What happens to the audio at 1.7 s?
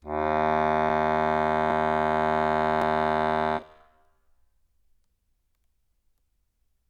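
At 1.71 s the music jumps abruptly: a short stretch of about 40 ms is simply missing, and the audio on either side is butted together with no gap of silence. This is likely a dropped buffer (overrun), where samples were overwritten before the software read them. On a waveform the trace snaps discontinuously at that instant; a spectrogram shows a thin vertical broadband line where the content shifts.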